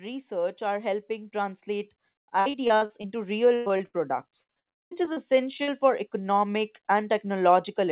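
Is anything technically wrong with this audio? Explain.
Yes, there are four kinds of fault.

From 0.29 to 3.41 s, automatic gain rising: the sound and background swell together by about 9 dB as the gain control, finding the input quiet, steadily raises its gain.

Repeated packet loss (robotic sound) occurs from 2.40 to 3.06 s, 3.56 to 3.95 s and 4.43 to 5.18 s, just before "for economic". The audio turns choppy because packets keep going missing and each hole is patched by extending the last sound. About a third to half of each stretch is filled this way, with single gaps of up to about 0.1 s.

From 5.57 to 5.60 s, a short concealed packet loss causes a brief smear or wobble. Roughly 20 ms never arrived and was bridged by continuing the preceding sound.

From 5.63 to 5.69 s, again just before "for economic", a burst of packet loss leaves a held, fading tail. About 40 ms in a row went missing, was filled with the last sound, and then the audio resumes further on.

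Throughout, the audio has nothing above 4 kHz, which fits a narrowband telephone codec on the call path.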